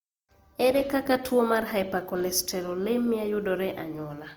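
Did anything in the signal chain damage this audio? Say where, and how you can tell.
Yes. Throughout, the speech sounds grainy and rough, bands noise-filled up to 20.1 kHz: likely Opus compression at the codec stage, CELT mode, fitting 24 kbps.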